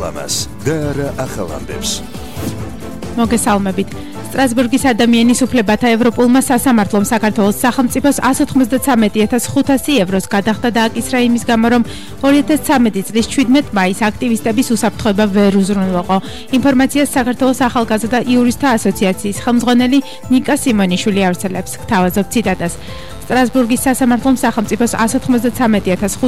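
From 22.42 s to the end, a steady, raspy buzz sits beneath the sound, roughly 20 dB below it. This is mains buzz: sharp spikes from 50 Hz power, twice per cycle, leaking in through a dimmer, rectifier or poor shielding, with harmonics reaching several kHz.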